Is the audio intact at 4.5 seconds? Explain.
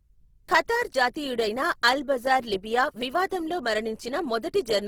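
No. At 4.5 seconds, as through the whole clip, the speech carries Opus compression, likely in its CELT music mode at a low bitrate around 16 kbps. Starved bands are filled with folded or noise content, so voiced sounds come out plainly rough, grainy and noisy, though the band still reaches about 20.3 kHz.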